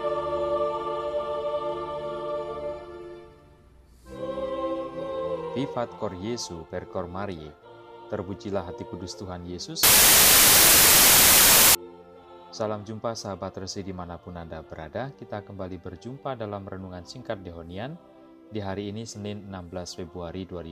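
Samples built from the wrong bytes appear from 9.83 to 11.75 s, a stretch of about 1.9 s. Across that span, the bytes making up each sample are assembled incorrectly, whether shifted by one byte, taken in swapped order or read against the wrong alignment. The rapidly fluctuating low-order bits end up in the most significant position, so the values swing almost at random and the sound is replaced by loud, harsh broadband noise until the fault ends at 11.75 s.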